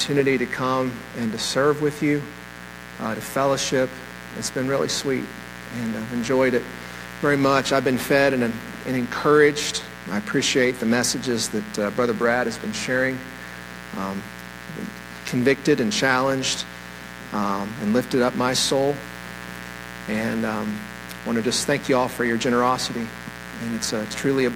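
From the very start to the end there's a mains buzz riding along, built on 60 Hz. Something like a dimmer, rectifier or poor shielding is letting sharp spikes in twice per cycle, so you get a raspy, harmonic-rich drone sitting only about 15 dB under the sound.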